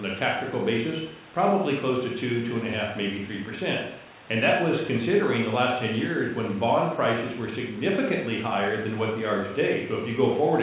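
No technical faults can be heard in this speech, which arrives over a narrowband call link with nothing above 4 kHz, consistent with a 64 kbps G.711 mu-law codec.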